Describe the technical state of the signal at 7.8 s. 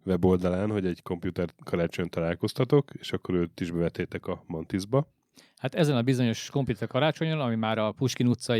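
At 7.8 s the speech signal is intact, with no audible technical fault at that moment.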